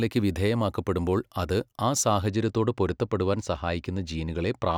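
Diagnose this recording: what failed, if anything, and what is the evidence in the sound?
Channel delay (comb filtering) at the driver or buffer stage, with the channels folded to mono. From 2.28 s, just after "വിധേയമാക്കപ്പെടുമ്പോൾ അത് ആ", to the end, the speech loses its top-end air and turns dull. A fixed notch sits around 10 kHz. One channel arrives a tiny fraction of a millisecond late, which fits an offset of a couple of samples. Summing it with the other cancels shared content at evenly spaced frequencies starting there.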